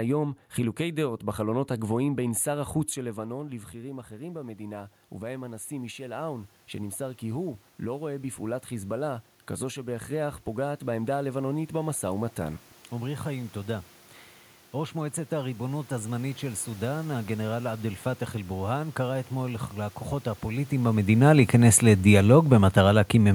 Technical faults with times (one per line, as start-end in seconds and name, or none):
0.00-23.34 channel delay (comb filtering)
2.97-13.91 automatic gain rising